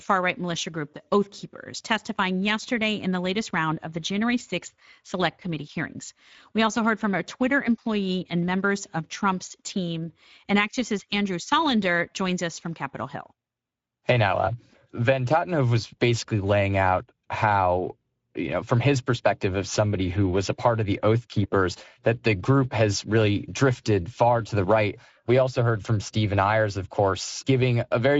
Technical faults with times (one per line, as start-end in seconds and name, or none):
0.00-28.20 Speex codec